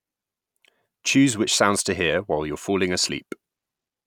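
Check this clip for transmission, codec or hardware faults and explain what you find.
Nothing wrong turns up anywhere in this speech recording.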